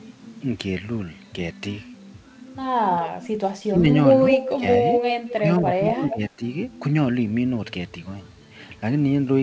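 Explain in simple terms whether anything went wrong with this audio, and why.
Speech suppressed in double talk: at 3.08–3.84, 4.53–4.65 and 5.35–6.42 s the voice dips or drops out in pieces, likely because both sides spoke at once. It goes quieter rather than repeating.

Echo leak: at 4.29–4.53, 4.91–5.33 and 5.91–6.17 s a copy of the voice returns about 0.22 s late, likely from loudspeaker sound slipping past echo cancellation. You hear a repeat, not a dip.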